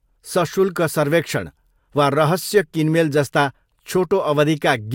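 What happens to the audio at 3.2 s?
Nothing goes wrong at 3.2 s; the speech carries on intact through that moment with no audible fault.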